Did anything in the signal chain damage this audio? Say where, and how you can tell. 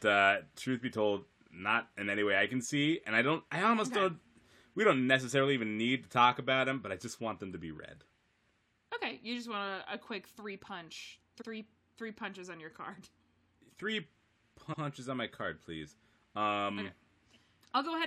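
Yes, repeated frames at the storage or network stage. Right after "a quick three punch", 11.40 to 11.47 s replays a 70 ms chunk, and 14.72 to 14.82 s repeats 93 ms before "on my card please". Each stutter fits a few compressed frames decoded twice.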